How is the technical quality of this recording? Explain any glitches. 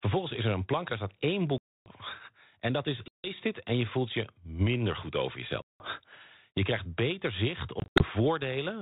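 The recording has four dropouts from packet loss on an ADPCM call, on speech carried by G.726 ADPCM at 32 kbit/s, whose band stops below 4 kHz.

Lost packets, about 280 ms at 1.58–1.92 s, 160 ms at 3.08–3.27 s, 180 ms at 5.62–5.86 s, and 140 ms scattered over 200 ms with runs up to 80 ms at 7.8–8.04 s, leave the decoder's predictor and step size out of step. Each hard-edged gap gives way to a brief, slightly distorted return.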